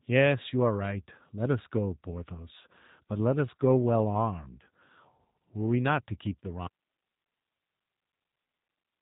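From the start the speech sounds slightly rough and synthetic, and nothing sits above roughly 3.8 kHz, so sibilants are dull and the top end is missing. This is the G.729 codec at work, with plainly audible damage: the voice is rebuilt from a vocal tract filter, a pitch predictor and a few pulses per short frame rather than sent as a waveform, a sound that fits an 8 kbit/s VoIP link.

At 6.67 s the speech cuts off abruptly and does not return. From there to the end only a thin hiss remains, around 55 dB below the earlier level. This is an audio dropout to a faint residue. The sudden break rules out a natural pause or a fade, and the hiss shows the path after the break stayed live. The likely cause is that the wanted signal was lost upstream while the rest of the chain kept running.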